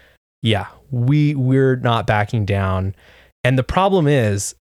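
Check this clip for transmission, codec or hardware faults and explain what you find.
No faults detected.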